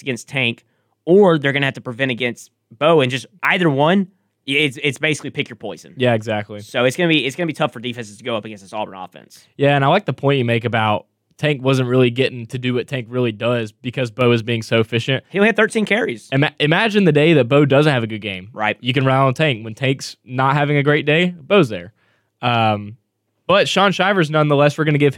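Speech clip with a sudden gain jump. After "wasn't really getting to", at 12.56 s, level and background noise drop together by about 4 dB. They return at 14.21 s, before "is being so efficient". This is likely an unramped digital gain change.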